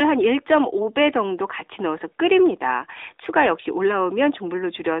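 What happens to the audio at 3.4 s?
At 3.4 s the speech is still passing through the AMR narrowband mobile codec, as it does for the whole clip. The sound is confined to a telephone band of about 300 Hz to 3.7 kHz, so it is thin and muffled. The codec rebuilds the voice from a vocal-tract model excited by sparse pulses. That gives a plainly audible buzzy, synthetic edge. The damage fits a mid-range rate near 10 kbps.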